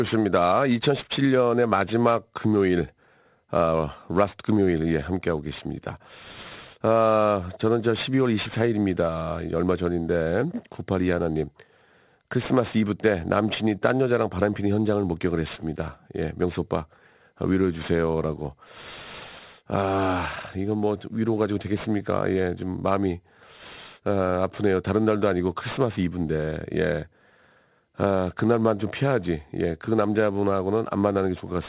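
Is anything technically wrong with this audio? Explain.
Yes. Aliasing runs throughout the speech. Energy above 4 kHz folds back downward, which fits unfiltered resampling to 8 kHz. Sibilants turn gritty and metallic.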